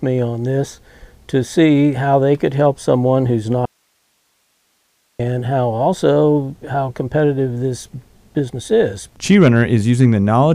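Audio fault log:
3.65–5.20 s, audio dropout to a faint residue: the sound cuts out abruptly for about 1.54 s. Only low hiss remains, roughly 45 dB below the signal. The wanted signal was likely lost upstream while the path after the break stayed live.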